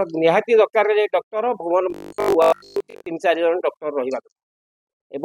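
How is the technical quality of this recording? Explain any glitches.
One glitch stands out. From 1.90 to 3.06 s the sound turns into a rigid, metallic 50 Hz buzz, robotic sound from repeated short buffers, likely caused by late audio being covered by looping the last 20 ms, replacing most of the real signal.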